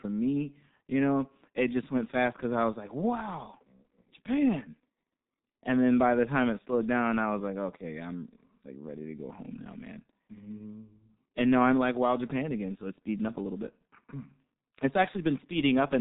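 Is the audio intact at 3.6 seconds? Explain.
No. At 3.6 seconds, as throughout, the speech carries G.723.1 codec damage. It is cut off above 3.8 kHz and sounds heavily muffled and hoarse with smeared consonants, which fits a coder at about 6 kbit/s. A plain low-pass filter would dull the sound without this grainy roughness.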